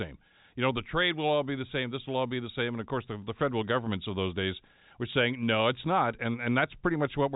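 No technical faults can be heard in the speech, which carries the usual traits of G.711 telephone coding: nothing above about 3.8 kHz and only faint quantisation noise that follows the level of the voice.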